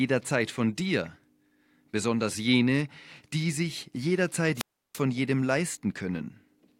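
At 4.55 s the speech breaks up in a wireless microphone squelch dropout lasting until 5.00 s. The RF carrier from the analogue FM transmitter fades, so the receiver's demodulated output briefly fills with rising hiss before its squelch circuit judges the signal too weak and mutes the output entirely. That mute holds for about 334 ms, leaving a near-silent hole in the speech, after which the carrier recovers, the squelch reopens and the speech returns.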